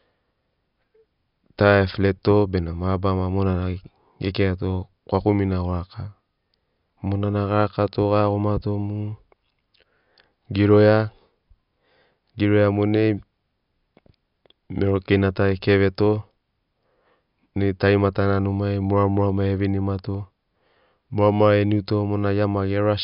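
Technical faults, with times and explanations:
There are no technical faults to list, so no times or explanations apply.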